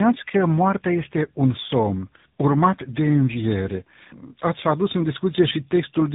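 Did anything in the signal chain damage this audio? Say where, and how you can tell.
Yes. The damage sits at the codec stage and runs through the whole clip: tandem speech coding. The speech sounds rough, muffled and warbly, worse than one low-rate coder alone. This points to two speech codecs in a row, for example GSM full rate and then AMR-NB. Each re-encoded the previous coder's output and added its own errors. A spectrogram would show a hard ceiling at 3.8 kHz and smeared, unstable formant bands.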